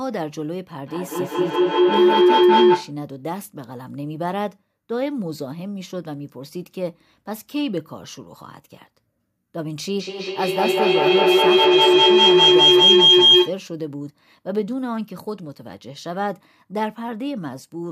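Feedback howl hits twice, from 0.85 to 3.01 s as a tone around 400 Hz, then from 10.0 to 13.68 s near 3 kHz. Each time a mic-to-speaker loop keeps gaining, swelling to about 12 and 13 dB over the speech and pulsing every fifth of a second or so.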